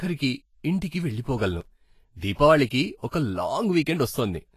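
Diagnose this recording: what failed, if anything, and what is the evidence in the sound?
Codec stage, likely Vorbis compression near 31 kbps: grainy, hissy treble throughout, coarse quantisation turning detail into noise. The spectrogram shows speckled highs and nothing above 14.2 kHz.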